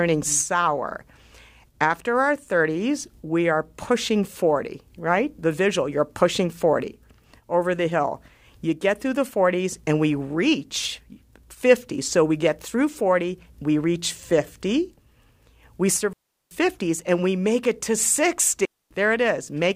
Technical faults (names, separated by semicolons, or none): digital wireless dropout